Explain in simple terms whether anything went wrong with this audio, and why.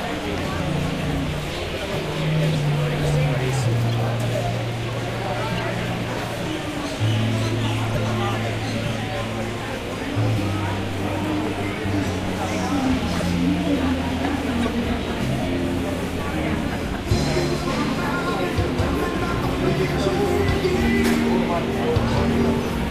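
Short chirps and noise bursts at 3.84–3.94, 5.58–5.64, 7.95, 13.2 and 14.6–14.68 s are a corrupt frame decoded: damaged compressed data was played anyway. Unlike a dropout, the sound is mostly replaced by wrong, out-of-place noise rather than silence.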